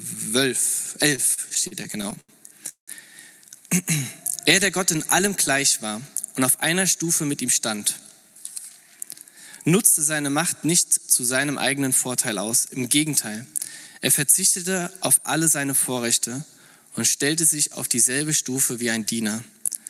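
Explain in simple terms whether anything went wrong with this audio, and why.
Yes, a few things went wrong. From 1.15 to 2.32 s there are repeated stalls (stutter). The sound hesitates 11 times, the longest for 83 ms, as late data keeps running out. Nothing is lost, but it drags.

At 2.69 to 2.91 s the sound hangs as a fading buzz, then falls silent for about 0.11 s before carrying on. This is likely a call audio freeze caused by delayed data.

From 5.97 to 8.31 s, and again from 13.45 to 13.95 s, there is a jitter buffer speed-up. The receiver trims tiny slices to catch up. The sound runs about 4% and then 6% faster, at the same pitch.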